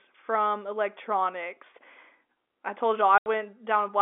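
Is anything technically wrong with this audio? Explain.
Yes. From 3.18 to 3.26 s the speech drops out for 80 ms because of packet loss filled with silence. Packets failed to arrive and the receiver played nothing in their place, so a stretch of audio, which fits four 20 ms packets, is simply missing. The sound is a short hole with hard edges. On the waveform it is a flat line with abrupt vertical cut-offs. On the spectrogram it is a blank vertical gap across the telephone band of 300 Hz to 3.5 kHz that this G.711 call carries.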